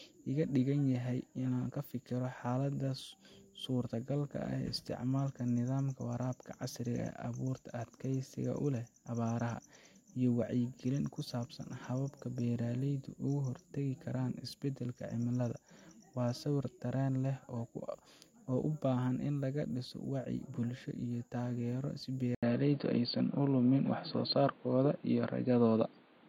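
After "bulsho iyo taageero si", at 22.35 s, the sound cuts out for 80 ms. From there to the end it is dull and boxy, with nothing above 4.6 kHz. The level shifts a few decibels. Faint new background noise appears. The input was likely switched to a poorer device.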